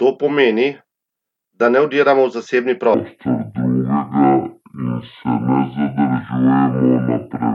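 A section at the wrong speed runs from 2.94 s to the end of the clip at 7.54 s. From that point the speech plays at 0.562 times its recorded rate, so it drags noticeably and drops by roughly ten semitones. Pitch and tempo fall together, which makes the voice sound deep, heavy and slowed. The likely cause is that this part was played back or resampled against the wrong clock rate.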